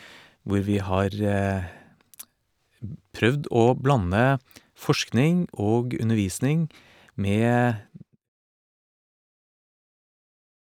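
No technical faults are audible in this speech.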